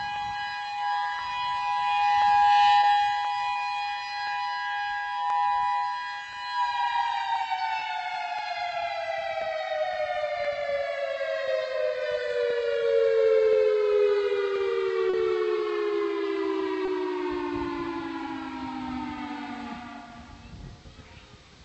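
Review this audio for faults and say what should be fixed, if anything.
A click recurs about every 1.03 s, from 0.16 s to the end. It is likely clock drift buffer slips. Two unsynchronised clocks, off by roughly 150 ppm, let the buffer creep until a handful of samples is dropped or repeated. Locking both devices to one clock, or resampling adaptively, prevents it.

Short concealed packet loss occurs at 2.81 s, 3.53 s, 7.79 s, 15.09 s and 16.85 s. Each gap is 20 ms, except 40 ms at 15.09 s. The receiver bridged each hole with synthesised sound, which leaves a brief smear. A deeper jitter buffer or forward error correction prevents it.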